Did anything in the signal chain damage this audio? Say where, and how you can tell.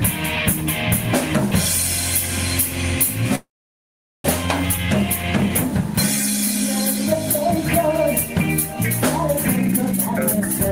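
Yes. A call audio freeze runs from 3.35 to 4.26 s, in the network and jitter-buffer stage. The last sound is stretched into a brief fading tail, then about 0.79 s of silence, and the audio resumes exactly where it broke off with nothing lost. Those 0.89 s are inserted time, pushing everything later. The likely cause is packets held up in transit, so the buffer emptied and the receiver filled the wait.

A jitter buffer speed-up starts at 9.48 s and continues to the end. The audio plays at about 154% of normal speed while its pitch stays the same, so it sounds hurried. Once the delayed packets arrived, the buffer was holding more than its target. The receiver cut it back by deleting many short pitch-period pieces in a row, which removes around 0.7 s of material.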